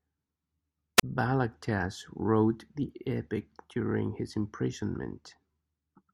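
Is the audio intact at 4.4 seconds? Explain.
Yes, at 4.4 seconds the speech runs on cleanly with no dropout, click, distortion or other fault.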